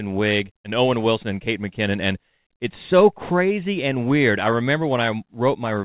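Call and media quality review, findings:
No faults found: the speech is band-limited with nothing above 4 kHz and carries the coding noise expected of a narrowband call path, which fits G.711 mu-law at 64 kbps.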